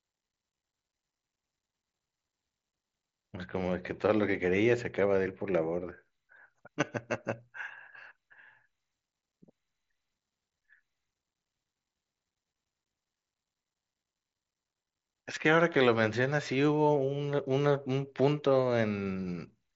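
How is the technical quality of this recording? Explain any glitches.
No glitches or technical faults can be heard here.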